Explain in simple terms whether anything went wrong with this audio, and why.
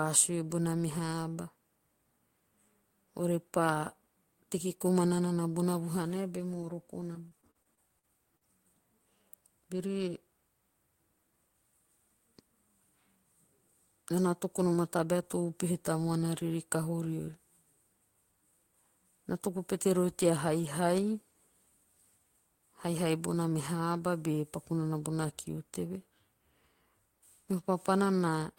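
Between 7.01 and 8.43 seconds the speech turns choppy and robotic. This is repeated packet loss: pieces of the signal went missing or arrived too late, again and again, which fits about eight separate holes. Each hole was patched by stretching the sound that came just before it, with the longest patch lasting about 41 ms. Roughly a sixth of that stretch is this filled-in sound, which gives the speech its choppy, broken quality.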